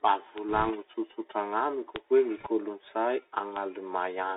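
Throughout, the speech passes through a Bluetooth CVSD headset codec. Its one-bit delta modulation, which fits a 64 kbps stream, confines the band to about 300 Hz–3.7 kHz and leaves scratchy sibilants over granular hiss. At 0.38 s a bit error spike flips two consecutive samples by a power of two, giving one sharp, broadband tick. From 0.49 to 0.72 s, bit errors on the Bluetooth voice link, at roughly one percent, corrupt the one-bit stream. Because each bit carries little weight, this becomes a rushing crackle rather than loud clicks. Another bit error spike at 1.96 s, three samples long, produces a single hard tick. Link bit errors return from 2.37 to 2.47 s with the same brief crackling rush. A final bit error spike at 3.56 s, one sample, is a lone sharp click.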